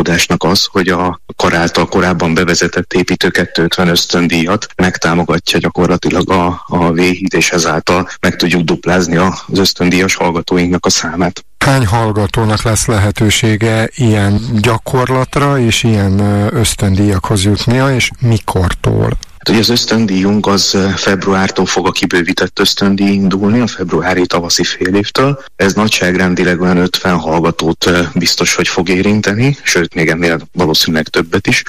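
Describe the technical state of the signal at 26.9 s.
At 26.9 s the signal is still in hard clipping, as it is across the whole clip. It is driven about 11 dB past what a stage can pass, so around a tenth of the samples are cut flat. The squared-off peaks add high harmonics, heard as a harsh fuzz on every loud passage.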